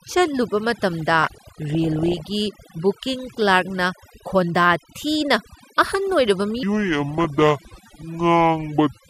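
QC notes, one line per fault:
Throughout: overdone noise removal. The background sits at near silence with small twinkling specks where isolated frequency bands pop in and out. The reduction is set so hard that any band close to the estimated noise floor is pulled far down or gated off, and the quieter components of the speech are removed along with it. Soft consonants and low-level detail in the voice are thinned out.
1.22–2.20 s and 7.11–8.01 s: DAB burbling. Both stretches carry short blips of noise laid over the speech. The sound points to bit errors slipping past error correction into the MP2 audio data, roughly one percent in the first run and about half that in the second. Corrupted samples put short noise blips into individual sub-bands, and corrupted scale factors make sub-bands leap in level for up to a frame, which produces the gurgling artefacts.
6.63–9.10 s: section at the wrong speed. 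From 6.63 s to the end, the audio runs at 0.628 times normal speed, so it is both slowed and dropped in pitch by roughly seven semitones, sounding deep and dragged. Because speed and pitch shift together at a single point, the likely cause is this portion being played or conformed against the wrong clock. The second burbling run falls inside this slowed section.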